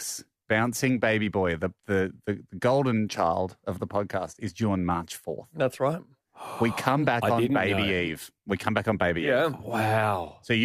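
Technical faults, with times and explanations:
7.68 s, corrupt frame decoded: a brief blip as a few damaged compressed frames were played anyway, misread gains and codes scattering energy to wrong frequencies, peaking about -25 dBFS.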